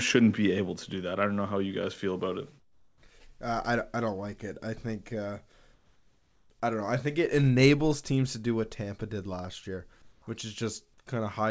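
Comfort noise in place of the background occurs at 2.60–3.02 s after "guys feel about it", 5.74–6.50 s after "it I think uh", and 10.02–10.22 s after "did last year". Each time, room tone becomes steady, featureless hiss, up to about 3 dB quieter, likely filled in during discontinuous-transmission pauses.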